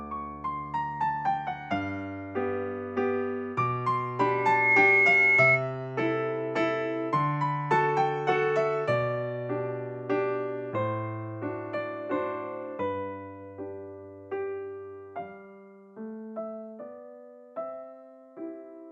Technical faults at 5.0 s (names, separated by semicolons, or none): loudspeaker feedback squeal